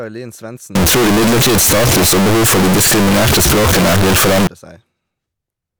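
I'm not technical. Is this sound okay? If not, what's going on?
No. From 0.75 to 4.47 s the speech turns into a very loud, harsh buzz, and the background hiss becomes as loud as the voice, though you can still hear its rise and fall. This is likely a fault called float read as integer: the audio was stored as 32-bit decimal numbers but read back as 32-bit whole numbers, so each sample's value comes out wrong and the waveform is flattened into a loud, square-edged shape.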